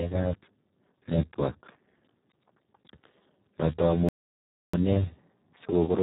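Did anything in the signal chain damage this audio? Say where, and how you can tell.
Yes. At the codec stage, Speex codec damage runs throughout: the speech sounds hoarse and noisy, which fits a very low bitrate of around 4 kbps. On a spectrogram, the harmonics look smeared into noise.

At playback, a stall cuts the sound to silence from 4.09 to 4.74 s, about 0.65 s, before it resumes. The likely cause is the player running out of buffered data or its thread blocking. The waveform shows a flat, dead gap in mid-flow, and the spectrogram a blank vertical band.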